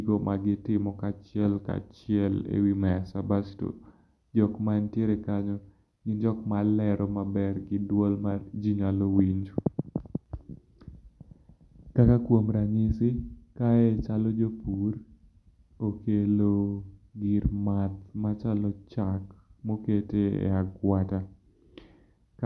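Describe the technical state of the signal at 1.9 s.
At 1.9 s the speech signal is intact, with no audible technical fault at that moment.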